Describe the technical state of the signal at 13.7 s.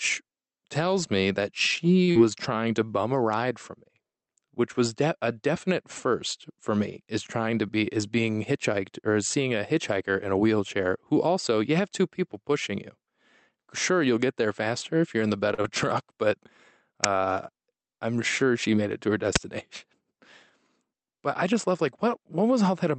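At 13.7 s the speech is intact, passing through the call path with only the normal band-limiting and coding noise of that connection and no fault at that moment.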